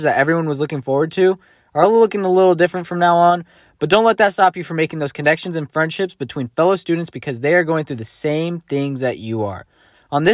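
A speech recording, and nothing is technically wrong with it.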